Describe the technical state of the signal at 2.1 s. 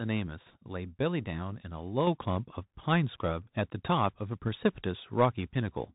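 At 2.07 s the microphone volume is stepped up: the speech and the background noise both jump by about 5 dB together in one instant, as if the input gain had been raised in one step. Nothing fades; the whole signal is simply louder from that point on. On a waveform the envelope shows an abrupt upward step in amplitude. On a spectrogram every frequency band brightens at once along a clean vertical boundary, noise floor included.

Underneath this, the signal carries plainly audible damage from the Bluetooth CVSD headset codec, which runs through the whole clip and so is present at 2.1 s as well. The sound is narrowband, consistent with a 64 kbps one-bit delta coder whose step size adapts as it tracks the waveform. Sibilants sound scratchy, loud bright passages distort where the step cannot keep up, and a granular hiss sits beneath the speech. A spectrogram shows a hard ceiling at 4 kHz with a grainy noise floor.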